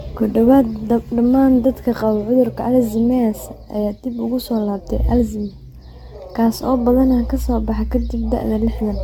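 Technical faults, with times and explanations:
Throughout, generation loss: the speech sounds swirly, hollow and smeared, with blurred consonant attacks and nothing above 17 kHz, which fits AAC-LC at 96 kbit/s likely re-encoded around seven times, each pass requantising on a shifted frame grid so noise and spectral holes accumulate.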